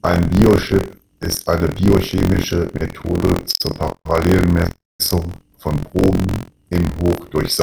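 Buffer tearing throughout: the ring-buffer writer and reader have slipped, splicing a slice of older speech into each period, heard as a robotic 43.1 Hz buzz.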